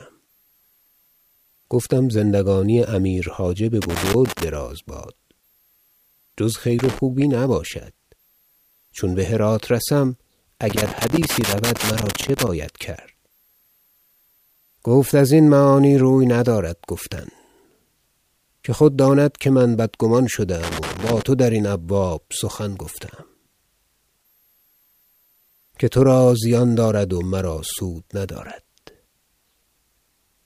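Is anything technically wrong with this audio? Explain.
Yes. Loose connector crackle occurs at 3.82–4.43 s, 6.79–6.99 s, 10.70–12.48 s and 20.63–21.23 s. A worn or dirty contact repeatedly breaks and remakes, chopping the speech signal into irregular scratchy bursts.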